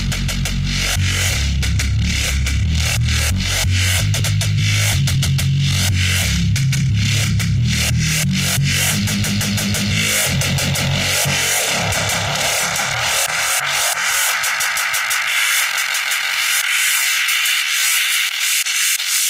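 At 4.19 s there is a skip ahead: roughly 0.4 s of audio was dropped while later audio was already queued, so playback lurches forward with no gap. A spectrogram shows an abrupt vertical seam where mismatched content butts together, and the waveform splices directly without any silent stretch.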